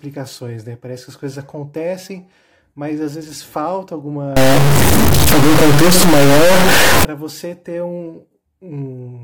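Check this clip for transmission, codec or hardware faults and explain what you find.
One fault turns up, in the middle of the speech. From about 4.37 to 7.05 s, right after "mas às vezes falta" and ending just before "você ter", the audio turns harsh and buzzy, and the gaps between syllables fill with gritty noise instead of going quiet. It sounds like a stuck bit, likely a high-order bit held fixed, pushing roughly half the samples off by a large step of about -5 dBFS and flipping around zero crossings.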